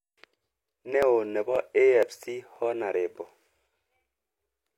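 At 1.03 to 1.05 s and again at 2.03 to 2.05 s, an overlap between stream segments trims about 25 ms at the one-second segment joins, leaving a small waveform jump heard as a tiny skip. After each, at 1.56 to 1.58 s and 2.56 to 2.58 s, overlapping chunks replay a 25 ms slice at each one-second chunk boundary, producing a brief stutter.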